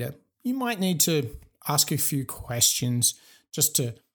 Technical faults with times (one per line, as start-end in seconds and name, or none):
none